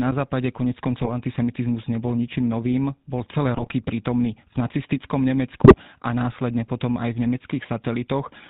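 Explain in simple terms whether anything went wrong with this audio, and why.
Yes, a couple of things went wrong. The whole recording has gone through the GSM full-rate codec, the original digital mobile-phone coder. It squeezes the speech by rebuilding the voice from a simple model driven by a coarse, regularly spaced pulse pattern, and it throws away everything above 4 kHz. That's why the speech sounds muffled and has that buzzy, gravelly grain running all the way through. The damage is plainly audible here.

On top of that there are three short bursts of GSM bit errors, where corrupted data got into the phone's speech decoder: around 1.01 to 1.09 s, 3.55 to 3.74 s, and 5.64 to 5.75 s. When those bits are wrong, the decoder gets bad instructions about the voice's tone, pitch or loudness, so for a moment the sound turns into squawks, pops and gargling. The middle burst is the longest, and the one near 5.6 s comes from the heaviest corruption.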